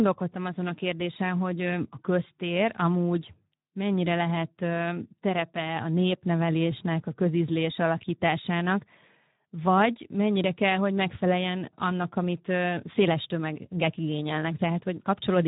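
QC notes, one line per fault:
Throughout: Speex codec. Sparse CELP excitation makes the speech audibly hoarse and noisy, consistent with roughly 11 kbps; nothing is present above 3.8 kHz.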